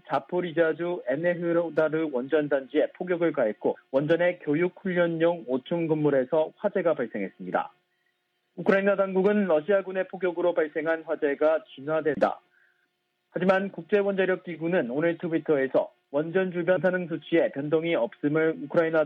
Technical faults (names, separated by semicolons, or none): damaged data in a compressed stream